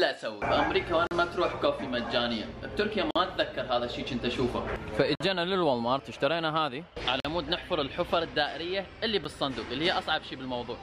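Hard-edged dropouts to silence cut the sound at 1.07–1.11 s, 3.11–3.16 s, 5.15–5.20 s, 7.20–7.25 s and a brief 9.24 s, each roughly 40–50 ms except the last, about 9 ms. These are gaps between stream segments: timestamps on the 2-second segments leave holes that the player fills with silence, though no audio is lost.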